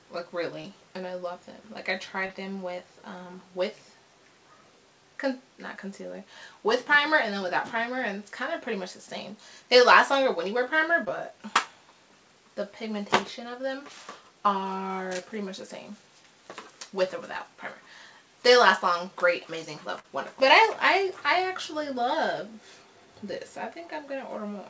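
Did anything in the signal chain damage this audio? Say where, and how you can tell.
Yes. Short concealed packet loss at 0.62 to 0.66 s, 2.26 to 2.31 s and 11.05 to 11.08 s is a network fault. The receiver bridged 20 to 40 ms gaps by extending the preceding sound, which is heard as brief smears.

A burst of packet loss at 19.99 to 20.06 s is also a network fault. About 40 ms never arrived, so the receiver held and faded the last sound, then resumed further on. The call codec's band limit, with nothing above 8 kHz, is audible throughout.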